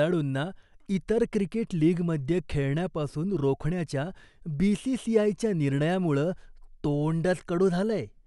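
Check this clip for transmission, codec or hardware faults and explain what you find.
No transmission, codec or hardware faults.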